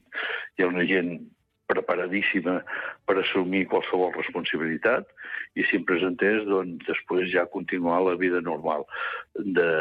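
No technical faults can be heard anywhere in the recording. Nothing in the audio calls for a timestamp or further comment.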